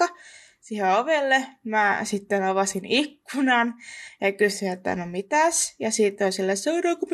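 No technical faults can be heard anywhere in this speech recording. There is nothing to place on the timeline.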